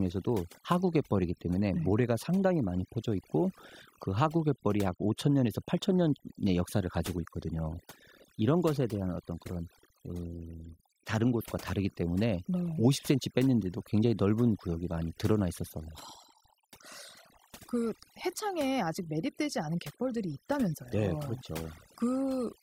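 From start to finish the speech carries overdone noise removal: a denoiser set far too aggressively has pushed individual frequency bands down or out whenever they sat close to its noise estimate, taking the softer parts of the voice along with the noise. The background drops and breaks up into twinkling specks. Unlike a noise gate, which mutes everything at once between phrases, this thins the voice band by band even while speech continues.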